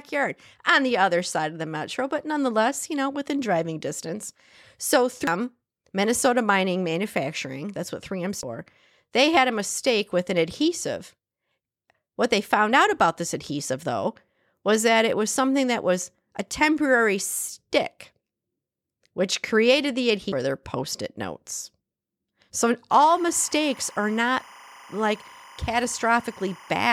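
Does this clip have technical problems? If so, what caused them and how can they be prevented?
Yes. Three brief blips at 5.27 s, 8.43 s and 20.32 s (the last just after "which created the") come from damaged data in the compressed stream. Corrupted bytes made the decoder misread those frames and lose sync until it found the next frame header, producing a short glitch. Verifying file integrity with checksums and using error-protected transfer prevents it.

From 22.92 s to the end, a chirping warble sits about 25 dB below the speech. This is timecode bleed: linear timecode at 25 frames per second leaked from an adjacent track or cable. Its square wave flips between pitches near 1 and 2 kHz, so it sounds like a rapidly alternating, data-like warble rather than the single steady pitch of a whine or hum. Keeping timecode on well-separated tracks and shielded, separately routed cables prevents it.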